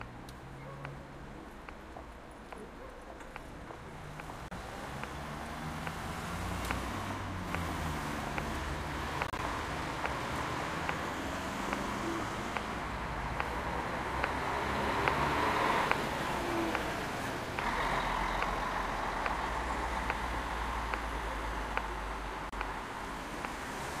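A recording of sounds with three brief silent gaps, likely a Bluetooth dropout: about 30 ms at 4.48 s and at 22.49 s, and 61 ms scattered over 9.27–9.40 s. The sound cuts out and resumes as if it had played on, consistent with lost packets.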